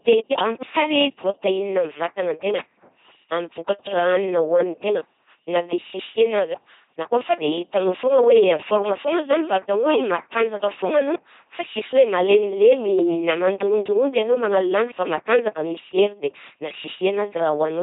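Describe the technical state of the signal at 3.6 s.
At 3.6 s the speech has a buzzing, mechanical, robotic quality, with stray buzz or hiss where voiced and unvoiced sounds are confused. This is the LPC-10 vocoder, present throughout the clip. Each frame is rebuilt by sending either a pulse train or noise through a simple vocal tract filter, never a mix of the two. The damage is heavy, and the rate is about 2.4 kbit/s.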